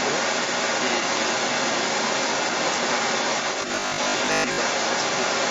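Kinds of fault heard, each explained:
Other side's voice leaking through: a second voice runs beneath the talker for the entire clip, and it is not faint. It sits roughly level with the main speech or a little above it. The likely cause is the far end playing from the talker's loudspeaker and getting past an echo canceller that did not remove it.
Robotic sound from repeated short buffers: from 3.62 to 4.62 s the speech hardens into a rigid, metallic buzz at 50 Hz that still loosely follows the talking. That pitch fits a 20 ms stretch of audio being replayed again and again while about half of the real signal is skipped, likely because new audio arrived too seldom. Mains hum would sit steadily underneath the speech, but this buzz stops after that second.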